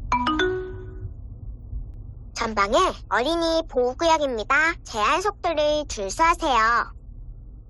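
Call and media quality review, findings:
Overlap between stream segments: skips at 1.94 s and 5.92 s, about 4 s apart, consistent with 2 s segment boundaries; player trims overlapping timestamps, dropping milliseconds and jumping the waveform.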